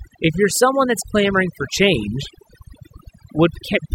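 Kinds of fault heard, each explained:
Overdone noise removal: a noise reduction pass set too strong runs through the whole speech clip, switching off individual frequency bands near the noise estimate, so the background drops and breaks up into twinkling specks, unlike a gate, which silences everything at once.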